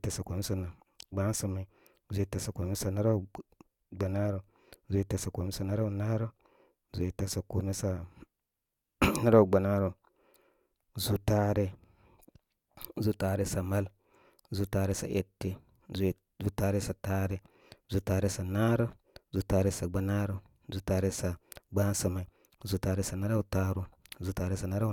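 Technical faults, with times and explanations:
Nothing technical goes wrong anywhere in this speech recording, so there's no fault to list.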